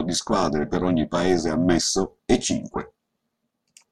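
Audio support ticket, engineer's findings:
Overlap-add ripple throughout: metallic buzz around 400 Hz, about 11 dB deep, from frame overlap not summing flat. Waveform envelope is scalloped and the spectrogram is vertically striped.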